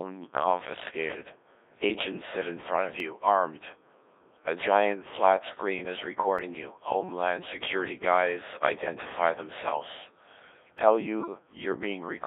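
Right from the start the whole thing runs through a Codec 2 vocoder, and it sounds like one: robotic, buzzy speech squeezed into roughly 300 Hz to 3.6 kHz, with heavy damage that fits the 1.3 kbit/s mode. Only pitch, voicing, energy and spectral shape survive, and the decoder rebuilds the voice from sine waves.

At 3.00 s, right after "sit in front of", and again at 6.39 s, after "giant flat screen is", there's a single sharp click. Each is most likely dropped samples, with well under a millisecond missing, so the waveform jumps abruptly instead of any sound actually going missing.

Then from 11.2 to 11.34 s come bit errors on digital voice radio, at around one bit in twenty. The damage spans about a couple of frames, and because each bit steers a whole frame's pitch, level or tone, the voice briefly lurches into warbly, garbled robot noise.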